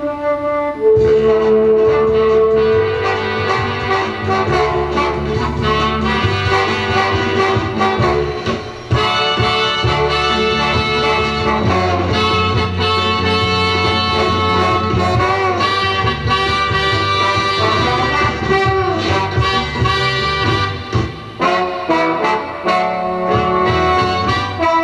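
No technical faults can be heard anywhere in the audio.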